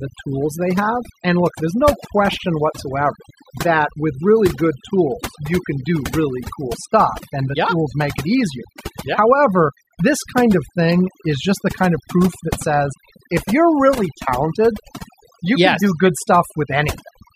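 It's a speech clip, and the whole thing suffers from overdone noise removal: the reducer was pushed so hard that bands near its noise estimate get gated away, taking the quieter parts of the voice too, so the background drops and breaks up into twinkly specks. On top of that there are two corrupt frame decoded glitches, where damaged compressed data got played anyway and sprayed energy into the wrong frequencies. The first is a short glitch at 10.89 s, right after "however this kind of" and before "is just the kind", peaking around -15 dBFS and sounding like a couple of bad frames. The second, a bit louder and even shorter, hits at 16.05 s just after "you yes can do", consistent with a single bad frame.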